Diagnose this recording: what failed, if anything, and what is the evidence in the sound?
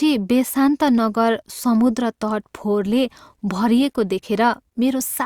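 Nothing failed; no faults present.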